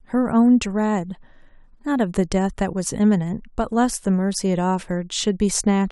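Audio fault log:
No faults detected in playback.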